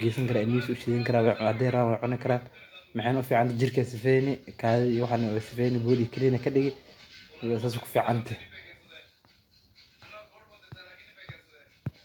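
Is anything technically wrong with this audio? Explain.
No, nothing technically wrong can be heard in this speech recording. There is nothing here that needs a technical explanation.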